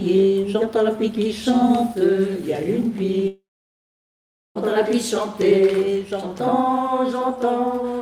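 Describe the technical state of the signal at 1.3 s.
At 1.3 s the signal is intact, with no audible fault present at that moment.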